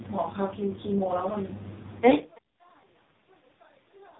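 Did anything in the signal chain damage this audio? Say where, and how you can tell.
Yes, at the codec stage: the whole clip has passed through the AMR narrowband mobile codec, and the heavy damage points to one of its lowest modes, near 5.15 kbps. Nothing survives above about 3.9 kHz, so the speech sounds boxed in and telephone-thin. At such a low bitrate, each 20 ms frame is rebuilt from a coarse vocal-tract model and a sparse pulse excitation, which leaves the speech buzzy and synthetic from start to finish.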